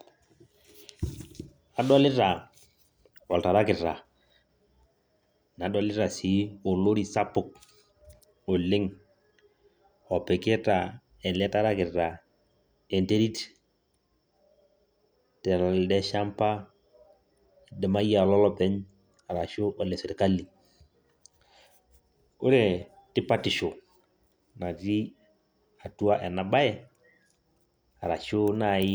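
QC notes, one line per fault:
Nothing to flag on this speech clip, as far as I can hear.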